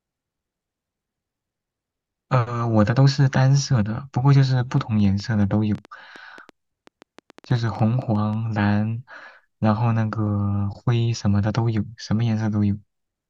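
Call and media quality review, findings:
Train of clicks, 4.72 to 8.34 s. Roughly 30 similar pops at about 6.9 per second, uneven spacing, peaking near speech level, audible in pauses too. Likely external interference or a faulty connection or power supply injecting repeated pulses.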